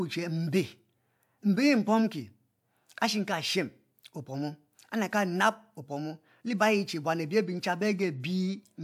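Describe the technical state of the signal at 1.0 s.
At 1.0 s the speech signal is intact, with no dropout, distortion, glitch or other audible fault at that moment.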